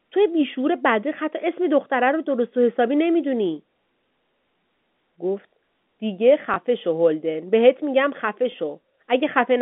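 At 6.54–6.56 s and again at 8.52–8.54 s there's a brief dropout handled by packet loss with last packet repeated. Each gap is 20 ms, which fits a single lost 20 ms packet. The receiver just replayed the previous chunk of speech to fill it, so you get a small blip. Around it, the G.711 telephone band stays narrow, topping out near 3.6 kHz.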